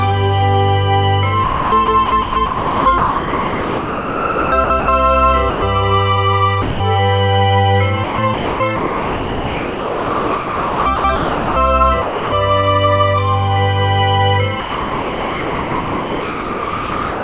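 Heard over a narrowband call path that tops out at 4 kHz, which fits G.711 mu-law, there's sound chopped by the voice detector from 1.44 to 4.88 s and 8.04 to 11.56 s, flickering between real audio and synthetic comfort noise, likely from the sender's detector toggling transmission. Then there's sound dropped by the voice detector at 5.5–5.62 s, 6.62–6.8 s, 12.02–12.32 s and from 14.6 s to the end, where the audio gives way to steady comfort noise, likely because the detector treated it as background.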